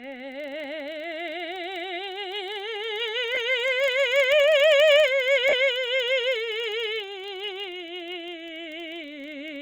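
Throughout the music there is a low buzz at 25 Hz, the sign of a filter restarted on every block. The filter discards its internal state at each block boundary and starts again from silence, so every block opens with a small transient. At 25 blocks per second these merge into a rough buzz that rises and falls with the level of the music.

At 3.35 s a 20 ms gap shows lost LE Audio frames, consistent with two 10 ms LC3 frames going missing. The decoder fills the hole by repeating the last spectrum with randomised signs, so tonal content briefly turns into a noisy smear. At 5.49 s a longer 40 ms loss, about four frames, does the same. Light lossy compression is also present.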